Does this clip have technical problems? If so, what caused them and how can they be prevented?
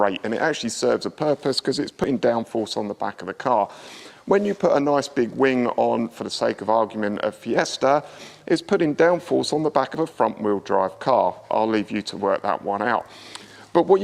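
Yes. There is audio missing between chunks at 2.04 s and 9.95 s, where roughly 40 ms vanishes and the two sides butt together, likely from 4 s recording chunks dropping samples at each handover. Buffering continuously across chunk boundaries, or overlapping chunks slightly, prevents these gaps.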